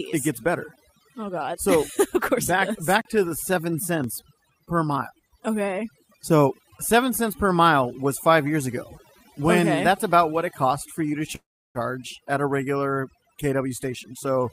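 Overdone noise removal runs through the whole clip: the suppressor was set so aggressively that it drops any frequency band near its noise estimate, taking the quiet parts of the speech with it. The background sinks to near silence speckled with twinkling artefacts.

At 3.01 to 3.05 s, and again at 4.04 s, there is a block of digital silence, where stretches of samples were replaced with zeros, as happens when the output buffer isn't filled in time. The first gap lasts about 38 ms and is heard as a short hole with abrupt edges. The second, only about 3 ms, comes across as a single tick.

From 11.35 to 11.78 s comes a call audio freeze, likely caused by packets arriving late so the jitter buffer ran dry. The receiver fills about 395 ms, holding the last sound as a fading buzz and then about 330 ms of silence, before the speech resumes where it stopped with nothing lost, only pushed later.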